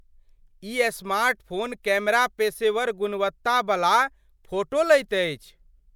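Nothing stood out on listening to this speech recording.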